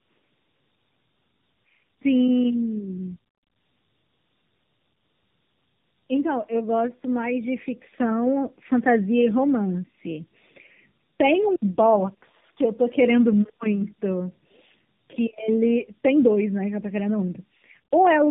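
From start to finish, the speech carries tandem speech coding: it sounds like two AMR-NB-style narrowband coders in a row, with a plain telephone link between them. The second coder chews on the first's damage, so it's rough, muffled and warbly, with nothing above 3.8 kHz.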